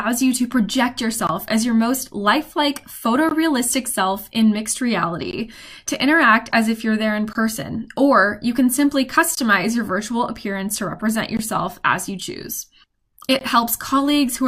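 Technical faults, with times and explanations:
1.27–1.29, 3.29–3.31, 5.31–5.33, 7.33–7.35, 9.35–9.37, 11.37–11.39 and 13.39–13.41 s: gap between chunks. Each is a 20 ms hole of silence that recurs at a steady pace, which fits the audio being delivered in 2 s blocks with a short dead stretch inserted before each new block starts. Nothing is removed, but the sound stops and restarts abruptly. On the waveform, each gap is a flat line with sharp edges on both sides. On a spectrogram, it is a thin vertical blank strip across all frequencies, evenly spaced about every 2 s.
6.51–6.53 and 11.00–11.02 s: corrupt frame decoded. At 6.51 s, one damaged frame was played as if it were valid. At 11.00 s, a few frames were hit. Misread gain and spectral values put energy where the audio has none, which sounds like a brief chirp or blip. The first error peaks at about -25 dBFS and the second is quieter, at about -30 dBFS. 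On a spectrogram, each appears as a short, frame-wide block of smeared energy unrelated to its surroundings. On the waveform, each is a small, isolated burst.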